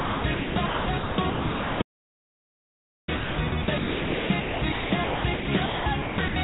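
From 0.00 to 6.36 s the sound is chopped by the voice detector, likely from the sender's gating: about 4.02 s in total goes to comfort noise, so the holes carry synthetic hiss rather than silence. From 1.82 to 3.08 s an audio dropout to silence lasts 1.26 s, likely from a lost input. Unlike the gated holes, it is dead quiet with no room tone. Throughout, the G.711 mu-law call path leaves nothing above 4 kHz.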